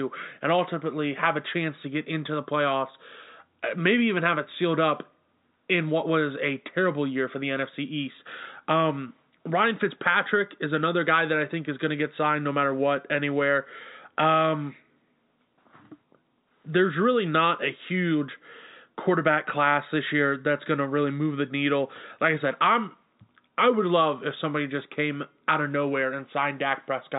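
Nothing faulty can be heard anywhere in this speech.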